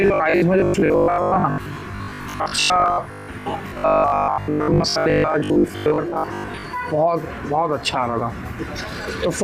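From 0.02 to 6.66 s, audio likely arrived too seldom, so about half became repeated short buffers: a robotic sound with a rigid 50 Hz buzz.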